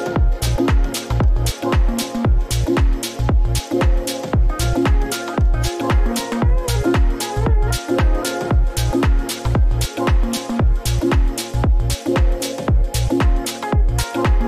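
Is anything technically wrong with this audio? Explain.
No, nothing technically wrong can be heard here.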